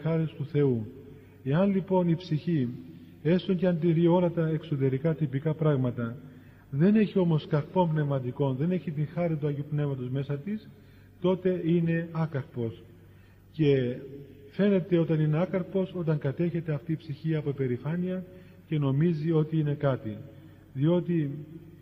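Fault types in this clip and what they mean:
No technical problem can be heard anywhere in the signal, which holds steady with no dropouts, distortion or interruptions.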